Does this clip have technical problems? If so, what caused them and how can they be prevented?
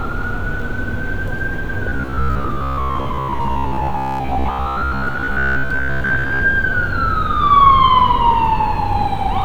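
Yes. From 1.89 to 6.43 s the sound turns rigid and metallic, locked onto a steady buzz at about 66.7 Hz while the underlying sound only loosely shows through. This is robotic sound from repeated short buffers, likely caused by audio arriving too seldom: the playback fills each gap by looping the last 15 ms slice, whose repetition rate sets that buzz, and for most of this stretch the real sound is skipped. Prevent it by giving the stream enough buffering and stable delivery that playback never runs dry.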